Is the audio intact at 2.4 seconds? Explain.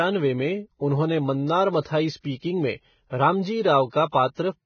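No. From 2.37 to 2.42 s there is pre-echo, about 56 ms of it, just before "में रामजी". A transform codec spreads its quantisation noise across a whole block. Here a sharp onset sits late in its block. The noise, sized for that loud onset, also spills into the quiet gap before it. You hear a brief hiss ahead of the attack. The attack itself sounds softened and smeared.

That moment also carries the damage heard through the whole speech clip. It is grainy and hissy, with roughened tones. Nothing is present above 6.5 kHz, so the treble is gone. The likely cause is heavy Vorbis compression at a low rate, which fits roughly 16 kbps. At that rate fine treble detail is quantised so coarsely that it turns into noise, and the cut-off is pulled down.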